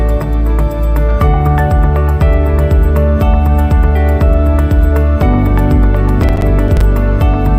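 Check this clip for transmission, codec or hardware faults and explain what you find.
There is one fault, a processor overload crackle from 6.09 to 6.81 s. The processor fell behind on its short audio buffers, each apparently around 5 ms long, and missed about ten deadlines scattered across that stretch. Each missed buffer was filled with silence, so the sound drops out in tiny hard-edged holes. Together they form a gritty, crackling tear over the audio that clears once the load eases at 6.81 s.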